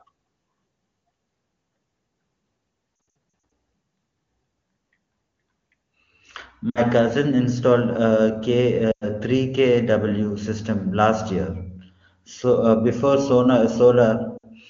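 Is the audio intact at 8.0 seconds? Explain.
Yes, the audio is intact at 8.0 seconds, with the speech carried cleanly through the AMR wideband (HD Voice) codec at its top rate of 23.85 kbit/s and no fault at that moment.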